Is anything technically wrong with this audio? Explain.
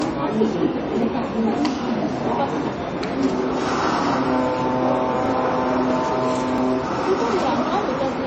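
Yes, there are two problems. MP3 compression affects the whole clip. The sound has a watery, swirling quality. That points to a heavily starved MP3 encode at a very low bitrate, around 30 kbps. The encoder let weak frequency components flicker on and off between frames.

Dropped buffers (overrun) occur at 1.02, 2.28, 3.34, 5.26, 6.58 and 7.42 s. Each one is heard as a small jump forward in the audio, with no gap of silence. The likely cause is samples being overwritten before they were read. Each jump skips roughly 20 ms, or about 10 ms at 3.34 and 5.26 s.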